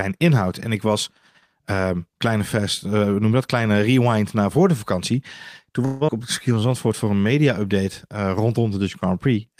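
Speech clip with two faults. From 5.85 to 6.10 s the sound trails off as a fading buzz lasting over 200 ms, then about 120 ms is skipped outright. This is likely a long network dropout; a brief packet loss would be concealed in tens of milliseconds. From 6.55 to 7.60 s, just before "eh rondom", a jitter buffer slow-down stretches speech to 90% speed, adding 114 ms at unchanged pitch, where tape-style slowing would lower the pitch.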